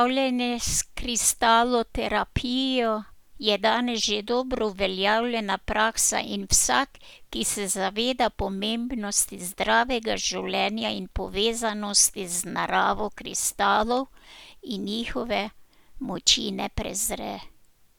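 Listening to the speech from beginning to end, nothing stood out as a technical problem at any point.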